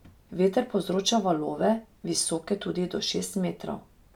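No technical faults are audible.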